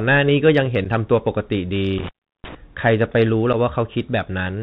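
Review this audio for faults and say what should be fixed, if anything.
The Bluetooth CVSD headset codec runs throughout: its one-bit delta coding fits a 64 kbps link, removes everything above 4 kHz, and leaves granular hiss and scratchy sibilants. A wideband codec such as mSBC would prevent it.

Unconcealed Bluetooth headset packet loss occurs at 0.84 s and 3.53 s. Each is a gap of about 7.5 ms with abrupt edges, which points to a single lost packet. Keeping the headset close to the phone, away from interference, would prevent it.

Intermittent contact occurs from 1.98 s to 2.55 s. The signal drops out for about 350 ms in total, with crackle where the connection opens and closes. Reseating or replacing the loose cable or plug would prevent it.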